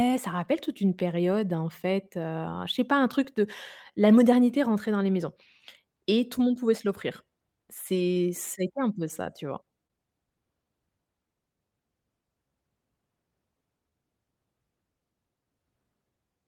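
Clock drift between sender and receiver runs through this speech: the sender's clock is roughly 2% slow, so the receiver's buffer keeps draining and needs constant correction. Repeated timing corrections from 0.36 s to the end stretch the audio to 98% speed, adding around 300 ms through small, unevenly spaced repeats. Scattered short gaps between 0.99 and 3.27 s, about four brief holes filling roughly 30 ms in all, the longest roughly 10 ms, are patched by continuing the last sound, leaving tiny ticks or smears. A short stall from a late packet at 9.87 to 9.92 s holds the sound 25 ms too long while the buffer sits empty, then resumes with nothing lost.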